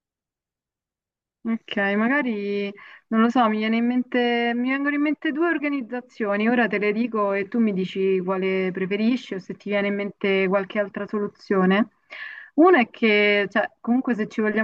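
No technical faults can be heard in the speech at any point.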